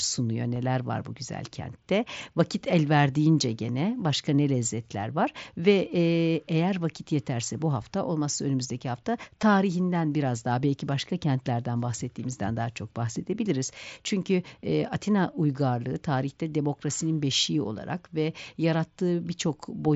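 Concealed Bluetooth headset packet loss occurs at 0.54 s, about 15 ms, and at 9.42 s, about 7.5 ms. Each gap is filled with repeated waveform, so the second, a single lost frame, is nearly hidden.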